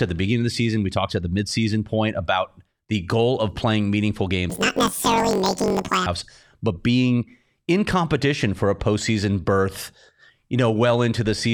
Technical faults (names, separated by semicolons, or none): planar audio read as interleaved